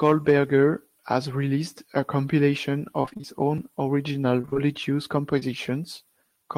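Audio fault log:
3.01–3.25 s and 4.41–4.57 s, repeated packet loss (robotic sound): the first stretch has six gaps and the second has four. Each gap is at most 25–27 ms, and together they make up half of each span. Every hole is patched by extending the sound just before it, and the next hole arrives almost immediately. The audio therefore comes out choppy, with fragments missing. Unlike a single concealed loss, the patches chain together into a stutter lasting roughly a quarter-second and then a sixth of a second.
5.39–5.43 s, short concealed packet loss: about 20 ms of audio failed to reach the decoder in time. The receiver bridged the hole with roughly 23 ms of continuation from the preceding sound, then blended back into the real signal. The result is one brief smear or wobble rather than a train of repeats. Its isolation and short length separate it from the robotic runs earlier in the clip.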